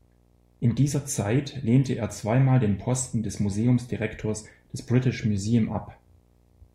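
Video or display buzz runs under the speech from start to finish: a screen or video cable couples its 60 Hz field-rate signal into the audio, well below the speech. Unlike smooth mains hum, it sounds harsh and buzzy, with fizzy hash above it.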